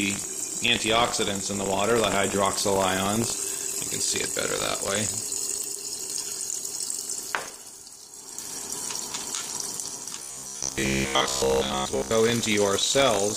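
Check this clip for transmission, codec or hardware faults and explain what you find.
Two faults are present: buffer tearing through the whole clip, and a stretch of robotic sound from repeated short buffers near the end.

Buffer tearing runs from start to finish. The writing program and the playback hardware have drifted out of step around the ring buffer, so their positions cross once per period. A small slice of each buffer, a few percent, still holds audio from roughly 70 ms earlier, spliced in with abrupt edges on both sides. Those splices recur at 50 Hz, laying a steady rattling buzz over the sound that is present whenever there is signal.

From 10.19 s to 12.14 s the sound turns into a rigid, metallic buzz at 66.8 Hz, a repeat period of about 15 ms. The likely cause is fresh audio arriving too rarely, with the software filling each gap by replaying the last short buffer. Most of the material in that stretch, around two thirds or more, is repetition, and the real audio underneath is skipped. 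The result still roughly follows the underlying sound.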